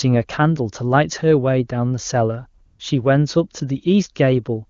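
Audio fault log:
2.65–2.79 s, AMR comfort noise: for about 140 ms the sound drops out and is replaced by a smooth, even hiss in place of the real background. The phone's voice activity detection treated this stretch as silence and stopped sending speech frames, so the receiver generated synthetic noise from a rough estimate of the background level and spectral shape. The switch into and out of that artificial floor is audible at both edges, and any quiet sound inside the gap is lost. The AMR wideband codec carrying the rest of the call, which sounds consistent with a high-rate mode, contributes no more than faint coding damage.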